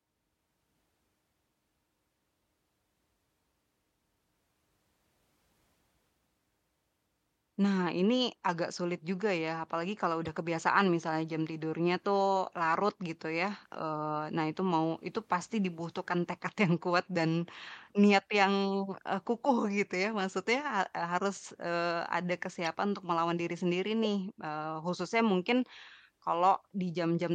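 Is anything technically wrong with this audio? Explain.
Yes. Corrupt frames were decoded at two points in this speech: at 10.25 to 10.29 s, between "juga ya apalagi kalau" and "kebiasaan misalnya jam tidurnya", a few frames' worth; and at 22.65 to 22.67 s, between "harus eee ada" and "untuk melawan diri sendiri", about one frame. Damaged bits in each frame scatter energy to the wrong frequencies, peaking around -25 dBFS, so each is heard as a brief chirp, blip or burst of noise. On a spectrogram each shows as a short vertical smear that doesn't follow the speech harmonics.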